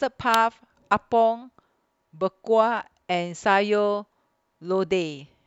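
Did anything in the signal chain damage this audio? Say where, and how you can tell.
Yes. At 0.34 s a sharp snap sits on top of the speech, peaking around -5 dBFS. It is an electrical switching spike, likely picked up in the analogue wiring. A nearby switch or discharge arcs, and the line carries that burst.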